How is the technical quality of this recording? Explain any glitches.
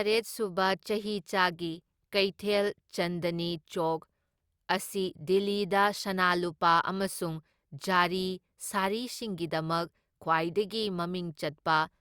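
No technical glitches can be heard anywhere in this recording. There is nothing to explain, as the speech holds steady throughout.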